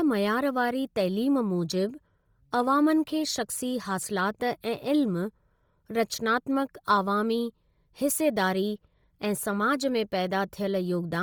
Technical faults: Bluetooth LC3 compression

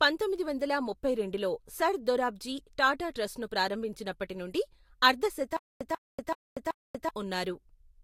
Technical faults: low-bitrate audio saved at a high bitrate; stutter with silent gaps

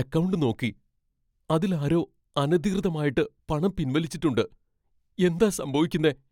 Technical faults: none

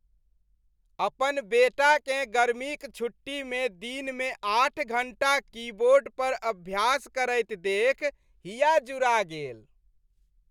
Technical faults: none

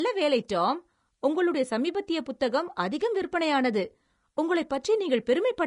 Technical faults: Vorbis compression

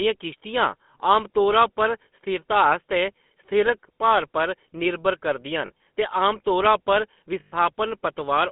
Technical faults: GSM full-rate codec; lost GSM frames

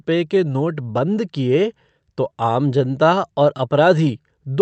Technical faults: clock drift between sender and receiver; repeated timing corrections

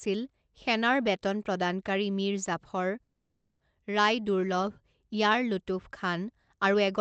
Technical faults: call audio freeze

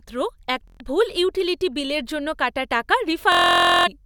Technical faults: Bluetooth stutter

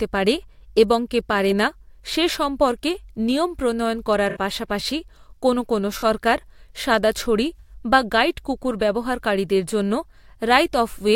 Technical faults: corrupt frame concealed

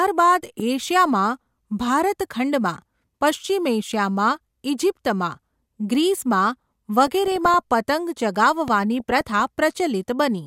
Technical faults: loud pop; DAB burbling

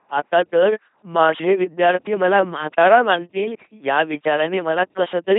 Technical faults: LPC-10 vocoder

